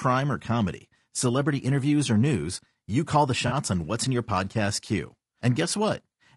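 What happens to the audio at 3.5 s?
From 3.47 to 3.53 s, just after "news you call the", there is AAC frame loss with concealment. About 40 ms of audio, which fits two lost frames, is rebuilt by the decoder from the last good spectrum. It is heard as a brief smeared, noisy patch rather than a clean dropout.

Under this, the whole clip carries low-delay AAC compression, likely AAC-ELD at a low bitrate that fits about 32 kbps. Its short frames resolve pitch harmonics poorly, so the speech sounds plainly rough and grainy, with noise filling the gaps between harmonics.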